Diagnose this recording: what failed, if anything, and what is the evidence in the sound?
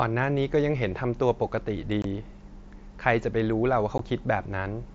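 Unconcealed Bluetooth headset packet loss on the radio link: the speech drops to sudden silence from 2.02 to 2.05 s (22.5 ms) and again at 3.98 s (15 ms), with hard edges. Both gaps fit whole 7.5 ms mSBC frames, which points to lost radio packets rather than a buffer underrun, and nothing fills them in.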